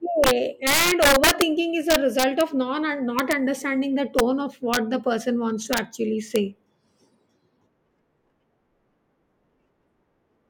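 Integer overflow cracks the speech at 0.24–0.31, 0.67–1.42, 1.90–2.41, 3.19–3.33, 4.19, 4.74–4.77, 5.73–5.78 and 6.36 s. Peaks past full scale wrap to the opposite sign, showing as full-height waveform flips and broadband spectrogram streaks.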